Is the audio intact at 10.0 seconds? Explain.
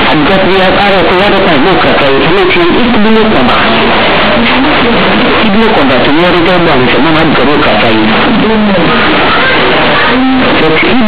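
No, at 10.0 seconds you're hearing companded audio read as linear, and it runs through the whole clip. The A-law bytes are played as plain 8-bit samples without expansion, so quiet passages blow up as loud as peaks, giving harsh, buzzy distortion and heavy noise in the pauses.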